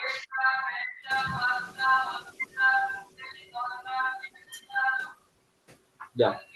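From 1.1 to 3.1 s the noise suppressor is catching up. Background noise jumps around one second, passes through with less reduction at first, then sinks about 9 dB over two seconds.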